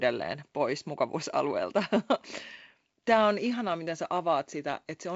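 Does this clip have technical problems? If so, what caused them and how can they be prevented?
No, no technical problems here.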